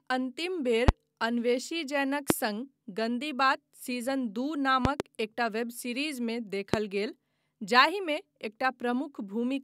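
Loud pops cut through the speech at 0.88–0.91 s, 2.30–2.33 s and 6.74–6.76 s, with a double pop at 4.85–5.03 s. Each is a sharp thump roughly 20–25 dB above the speech, which carries on underneath. The likely cause is a voltage step from a switch, static or driver glitch. On a waveform each appears as a tall, narrow spike, and on a spectrogram as a thin vertical stripe across all frequencies.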